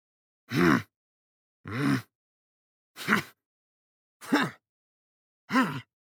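No technical faults can be heard anywhere in this recording.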